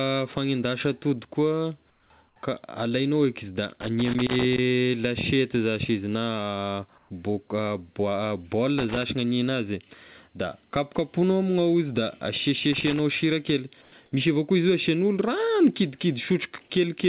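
At 1.9 to 2.1 s and again at 2.28 to 2.36 s, just after "fanendasa atody koa", short pauses lose their natural background and get a flat, featureless hiss about 5 dB quieter. This is comfort noise in place of the background, likely from discontinuous transmission filling silent gaps with synthetic noise. From 3.81 to 4.58 s, ending just before "lasiety zashy izy na", an irregular burst of scratchy crackle cuts through the audio. This is loose connector crackle, with a worn contact rapidly making and breaking the signal path. The same comfort-noise swap returns at 6.98 to 7.1 s, about 1 dB louder here, and further crackle bursts follow at 8.78 to 9.03 s and 12.73 to 13.0 s. The last comfort-noise patch, about 2 dB down, sits at 13.82 to 13.92 s between "sira kely" and "misy avao koa izy". Throughout, the call path carries nothing above 4 kHz, which fits G.711 mu-law coding.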